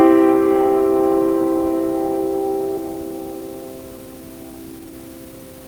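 A recording of everyday sounds with two faults. At 2.77 to 2.79 s there is a skip ahead: about a second of audio is dropped, either lost in transit or discarded when the jitter buffer overflowed with later audio already queued. Playback jumps forward with no fill, so the material on either side of the jump is joined almost directly and the events in between are simply absent. From 2.88 s to the end at 5.67 s comes a jitter buffer speed-up. The buffer is holding more audio than its target, so the receiver repeatedly cuts out short pitch-period-sized pieces to bring the delay down. The sound runs at about 117% speed with unchanged pitch and has a hurried feel, and roughly half a second of material is removed over that stretch.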